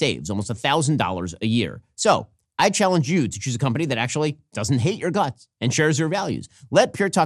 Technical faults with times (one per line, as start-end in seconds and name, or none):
0.00-7.26 MP2 compression